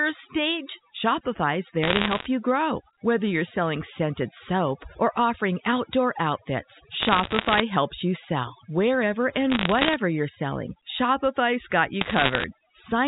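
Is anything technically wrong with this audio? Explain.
Yes, there are two problems in this speech clip.

Overdone noise removal runs through the whole clip. A noise reducer set too aggressively has pushed any frequency band that sits near its noise estimate down to almost nothing, taking the softer parts of the voice with it. The background collapses into near silence dotted with twinkling, chirpy specks. On a spectrogram, the gaps between words look blank, with scattered isolated dots, and the speech harmonics appear ragged and patchy.

Bit errors on a digital phone line appear in four bursts: 1.83 to 2.26 s, 7.00 to 7.60 s, 9.50 to 9.94 s, and 12.01 to 12.44 s. Flipped bits on the A-law telephone link each corrupt a single sample, and errors in the sign or upper bits throw that sample far off its true value. With an error rate of roughly one and a half percent, and somewhat under one percent in the 9.5 s burst, the result is a sharp crackle laid over speech that stays intact. 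The waveform shows isolated single-sample spikes, and the spectrogram shows thin vertical lines spanning the full band up to 4 kHz.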